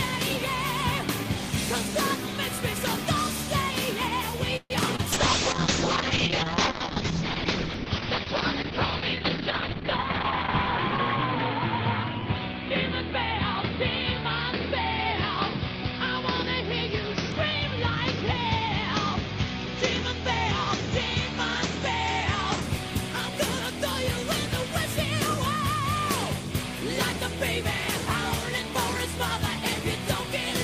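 From 4.56 to 4.72 s there is a call audio freeze. Packets were likely held up in transit long enough for the jitter buffer to run dry, so the receiver stretched the last sound to cover about 137 ms. It comes through as a short fading buzz that drops to silence for about 40 ms. The audio then resumes exactly where it left off, so nothing is lost and the rest of the clip arrives slightly later.

Just after that, from 4.96 to 5.00 s, comes a short concealed packet loss. About 20 ms of the stream never reached the decoder in time. The receiver covered the hole with about 22 ms of extrapolated sound, continuing what came before and then blending back into the real signal. The result is a brief smear or wobble at that point, and whatever fell in those 20 ms is gone.

At 5.14 s a call bitrate drop begins and lasts until 22.68 s. The bandwidth estimate collapsed, and the encoder was pushed from 40 kbps down to 7 kbps. 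It stayed at the lowest rate for 5.65 s. At that rate Opus codes everything more coarsely and narrows the audio band from 20 kHz to 6 kHz. The sound turns muffled and rough, with a watery texture, because the upper frequencies are missing and the remaining detail is quantised heavily. It stays degraded until the rate recovers at 22.68 s.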